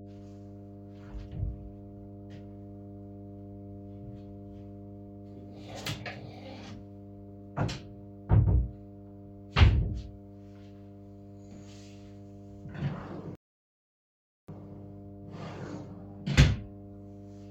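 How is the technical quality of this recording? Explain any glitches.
Two faults affect the recording: a steady hum throughout and one playback stall near the end.

Mains hum runs the full length. A ground loop or nearby transformer has coupled the 50 Hz power line into the signal, leaving a constant low tone with some low harmonics. It sits only around 15 dB below the wanted sound, so it is plainly audible under everything.

A rebuffering stall occurs from 13.35 s to 14.49 s. The player exhausted its downloaded audio and halted until more data arrived, so the sound drops to silence for about 1.13 s and then picks up exactly where it stopped. Nothing is lost, but the pause adds time.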